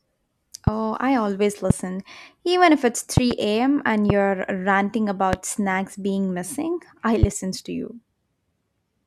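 Loud pops sit on top of the speech at 0.67, 1.70, 3.17 (a quick double pop just after "if it's"), 4.10, 5.33 (right before "snacks being missing I") and 7.23 (before "to you"). Each jumps about 20 dB above the speech, likely voltage spikes from a switch, static or driver glitch, while talking continues underneath.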